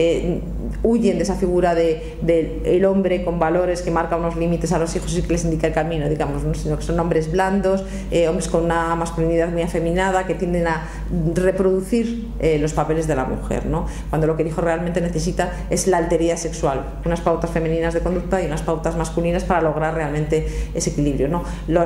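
Listening closely from beginning to end, nothing stood out as a technical fault at any point in the audio.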